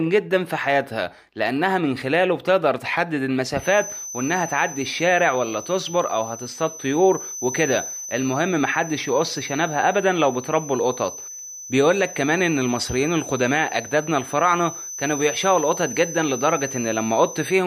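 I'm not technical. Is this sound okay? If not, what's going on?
No. From about 3.53 s until the very end, a thin, high whistle sits behind the sound. This is a feedback whistle. It stays on one steady pitch, around 6.1 kHz, and wobbles a little in loudness. It is quieter than the main sound. The likely cause is a loudspeaker feeding back into a microphone, right at the edge of squealing. The loop holds one tone without running away into a howl.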